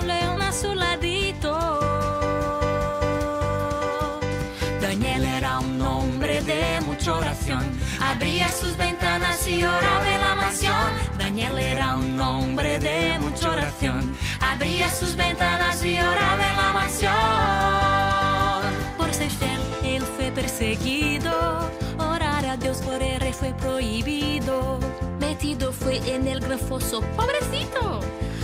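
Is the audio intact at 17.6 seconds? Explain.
Yes, the audio is intact at 17.6 seconds, with no dropout, click, distortion or other fault audible at that moment.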